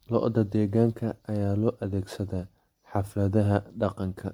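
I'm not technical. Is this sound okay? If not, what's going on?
No. The speech has generation loss throughout: swirly, hollow and smeared, likely from being re-saved as MP3 about ten times, which is worse than a single compression would sound.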